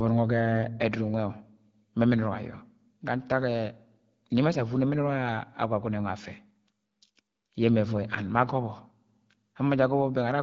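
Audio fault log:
Nothing to log here: the speech comes through an AMR wideband (HD Voice) link running at what sounds like about 12.65 kbit/s, and no faults turn up anywhere in it.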